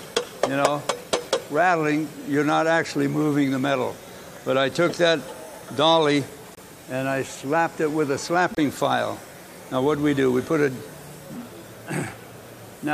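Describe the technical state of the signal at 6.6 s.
Right around there you've got a corrupt frame muted, from 6.55 to 6.59 s: the decoder rejected a damaged compressed frame and the player swapped in silence. It's an abrupt 42 ms gap, which fits one lost frame, and the timing afterwards stays put.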